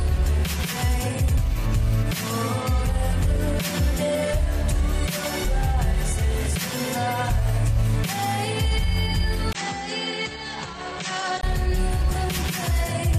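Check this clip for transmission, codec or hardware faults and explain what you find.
One fault is present. From 9.53 s to 11.43 s the sound abruptly turns duller and boxier, opening with a gap of about 20 ms, then drops roughly 10 dB in level and carries a new noise floor around 35 dB below the signal. Nothing survives above 8.3 kHz in that stretch. The likely cause is an input switched to a poorer device: a different microphone or headset path with narrower bandwidth and its own gain and noise.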